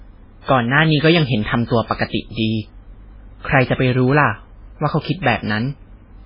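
From start to finish the speech has heavy MP3 compression damage, likely from encoding at a very low bitrate, which fits a rate around 16 kbps. Nothing survives above 5.3 kHz, so s sounds lose their hiss, and the weak frequency lines that remain flicker on and off between frames, giving a watery, swirling texture with smeared attacks. That flicker is what sets it apart from a plain low-pass filter, which would dull the treble while leaving the rest steady.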